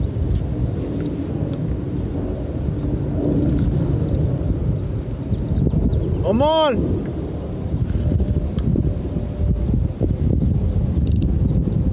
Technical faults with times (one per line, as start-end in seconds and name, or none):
none